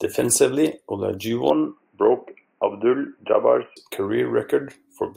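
From 1.5 s to 3.77 s the speech abruptly turns dull and boxy, with nothing above 3 kHz and a faint new background noise well below the signal. Level stays roughly the same, with no gap at either transition. The likely cause is the input switched to a poorer device, then back.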